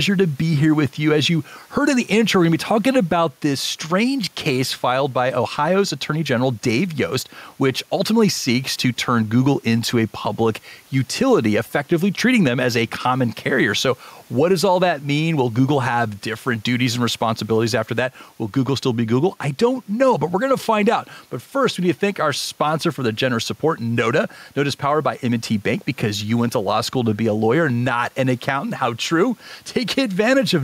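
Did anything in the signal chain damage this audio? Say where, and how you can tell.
Yes. The speech shows gain pumping from start to finish. The swing is around 5 dB. Room noise sits about 39 dB below the speech. Loud and soft syllables sit close in level, so the sound is squashed. The likely cause is input gain set far too high, with a fast limiter or compressor in the capture or call processing pulling it down on each loud sound.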